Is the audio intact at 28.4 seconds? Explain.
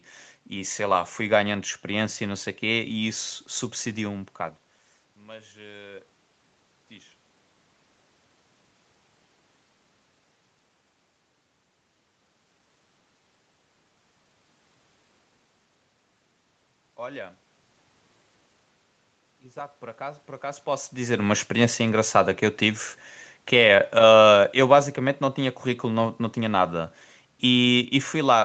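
No, not quite. At 28.4 seconds you're inside a stretch of automatic gain falling that runs from 21.16 s right to the end of the clip at 28.44 s. The automatic gain control decided the input was too loud, or its background noise too strong, and began easing its gain down bit by bit. So the speech keeps sinking in level over those last seven seconds or so, and the room background drops right along with it.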